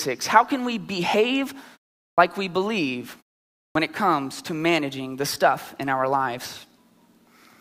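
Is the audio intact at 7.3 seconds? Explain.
Yes, at 7.3 s the speech is intact, with no fault at that moment.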